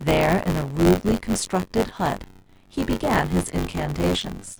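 From start to finish the speech carries a steady robotic rattle, and it's buffer tearing. The writer and the hardware reader of the ring buffer have drifted until they cross inside every period. So roughly a fifth of each buffer plays audio from about 20 ms earlier, with hard splices at both ends. Those splices repeat at 93.8 Hz, which fits a 512-sample buffer. That gives the buzz, and it rides only on the speech, not the pauses.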